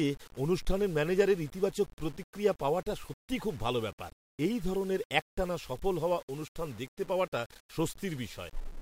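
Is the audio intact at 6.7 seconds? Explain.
No. At 6.7 seconds the speech is gritty and grainy, distortion that tracks the signal and runs through the whole clip. This likely comes from low bit depth without dither: the signal is rounded to about 7 bits, leaving error only about 25 dB below the speech. The waveform shows visible staircase steps, and the spectrogram shows broadband hash that rises and falls with the speech.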